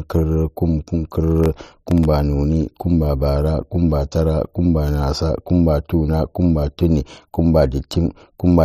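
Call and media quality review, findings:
Processor overload crackle, 1.44 to 2.05 s, clearing just before "noni kumba". The audio engine misses deadlines on very short buffers, under a millisecond each, and around fifteen drop to hard-edged silence. Waveform shows tiny flat notches, and the spectrogram shows thin broadband vertical streaks.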